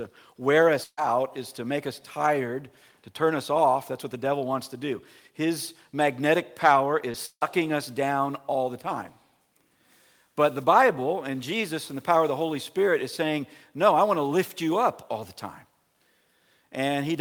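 The audio has three network faults, all of them losses of data in transit. At 0.83 to 0.99 s there is a burst of packet loss. About 140 ms of audio never arrived. The receiver stretched the last sound over roughly 138 ms, fading it, and then left about 20 ms of silence. Playback picks up further on, with that stretch gone. From 7.11 to 7.16 s a short concealed packet loss causes a brief smear. Around 20 ms failed to reach the decoder in time. The receiver patched it by extending the preceding sound for about 25 ms and blending back into the real audio. Just after, from 7.26 to 7.43 s, the sound turns into a fading continuation for about 152 ms, then falls silent for about 50 ms before returning. Roughly 160 ms of audio is simply missing. This is a long network dropout, likely a stretch where no packets arrived at all, so the receiver could only hold the last sound briefly and then give up.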